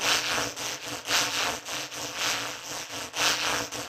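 Right near the end, at about 3.76 s, there's a quick blip from damaged data in the compressed stream. Part of the data got mangled, so the decoder misread that frame, lost sync and jumped ahead to the next header, leaving a very brief glitch.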